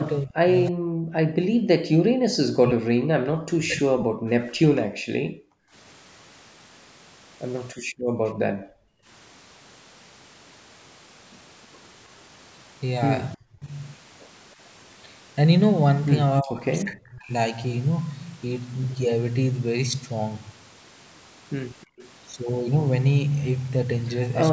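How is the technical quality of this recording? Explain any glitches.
The recording has three kinds of echo-canceller fault, all typical of a speakerphone call. The band stops at 8 kHz, as the call's microphone processing would leave it.

Speech suppressed in double talk occurs from 0.16 to 4.24 s, with about 3 s affected and dips of roughly 40 dB. It recurs at 13.35–13.7 s and 16.41–17.32 s, each about 30 dB deep. The voice ducks and breaks up, likely because the canceller mistook overlapping talk for echo. The waveform shows sudden troughs, and the spectrogram shows the energy thinning or vanishing.

An echo leak appears at 0.66–0.7 s and again at 21.81–22.1 s. A faint copy of the voice returns 311 ms late, at about 20 dB and then about 25 dB below the speech, likely echo the canceller failed to remove. On a spectrogram it looks like a weak, smeared duplicate of earlier speech patterns, offset in time.

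Background gated by the echo canceller cuts the room sound from 4.73 to 5.73 s and from 7.75 to 9.07 s, each by about 40 dB, and briefly again at 21.86–21.98 s by about 27 dB. The canceller clamped the microphone while the loudspeaker played. The noise floor drops to near silence, which shows as dark gaps in the spectrogram and a flattened waveform.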